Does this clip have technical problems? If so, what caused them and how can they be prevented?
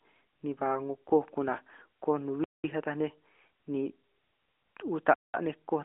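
Yes. AMR bit errors: on a weak radio link, flipped unprotected bits in roughly two frames, around 5% of bits, misplace the excitation pulses. The sound briefly turns scratchy and gargly from 1.08 to 1.11 s. Stronger channel coding or a more robust AMR mode on poor links would prevent this.

Gap between chunks: the audio is delivered in 2.5 s chunks, and each join leaves 200 ms of silence, heard as holes at 2.44 to 2.64 s and 5.14 to 5.34 s. Gapless chunk handling, with padding trimmed and playback of each chunk queued ahead of time, would prevent this. The narrowband mobile codec underneath adds only light coloration.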